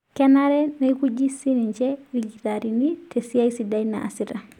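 No technical faults are audible anywhere in the speech recording.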